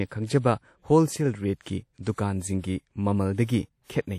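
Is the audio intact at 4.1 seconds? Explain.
No. At 4.1 seconds, as throughout the speech, the sound is plainly damaged. It rings and smears, with a hiss that swells and fades with the signal. Nothing is present above 16.5 kHz. The likely cause is WMA compression at a low bitrate, about 48 kbps.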